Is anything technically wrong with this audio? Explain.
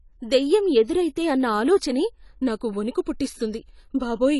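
Yes. Throughout the speech, the audio has likely been through AAC compression at a low bitrate, around 32 kbps, with damage that is plainly audible. Short of bits, the encoder quantised its frequency lines coarsely and dropped everything above 11.5 kHz, leaving gaps where detail fell below its hearing model. The voice sounds dull and smeared, missing its top-end air, and sibilants and held sounds take on a fizzy, warbling texture.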